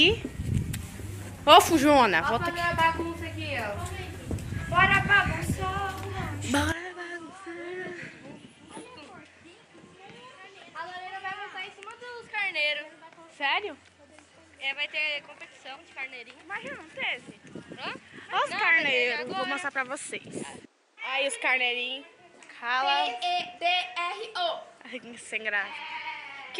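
At 6.72 s the input likely switched to a poorer device: from there to the end, nothing passes above 10.5 kHz, the level drops about 10 dB, and new background noise appears.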